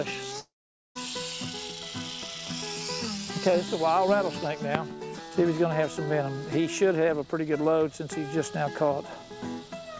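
From 0.40 to 0.97 s the sound smears into a fading buzz, then near-silence, before resuming with a chunk missing, likely a long network dropout.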